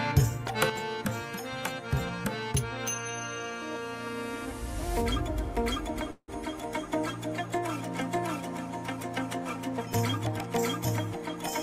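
At 0.70 s the whole sound, background noise included, drops by about 7 dB in a single step and stays there to the end. This sudden gain jump was likely a digital level change applied without a ramp, and it shows on a waveform as an abrupt narrowing of the envelope. From 6.11 to 6.30 s a call audio freeze fills about 166 ms with a fading continuation of the preceding sound, ending in roughly 40 ms of silence. Nothing is lost, but everything afterwards runs 166 ms late, likely from a jitter buffer that ran dry. On a spectrogram this appears as a smeared, decaying band followed by a blank strip.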